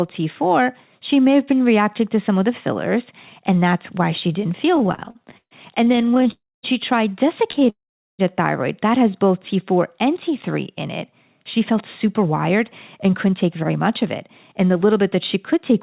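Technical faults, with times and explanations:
4.76–6.27 s, repeated stalls (stutter): right after "that's why she didn't" the speech drags and stutters through 24 brief holds, longest 134 ms, as late packets kept emptying the jitter buffer.
6.31–6.65 s, call audio freeze: a fading buzz drops into about a quarter second of silence, then speech resumes intact; likely packets held up until the buffer ran dry.
7.51 s, short stall from a late packet: a sound is held slightly too long just before "thyroid that", stretched about 26 ms while a tardy packet arrived.
7.70–8.21 s, call audio freeze: the sound fades out to nearly half a second of silence before continuing where it stopped, likely a delivery hold-up starving the buffer.
11.12–15.71 s, jitter buffer speed-up: after "in it" the speech runs about 6% fast at unchanged pitch, hurried, as roughly a third of a second of pitch periods was trimmed to cut built-up delay.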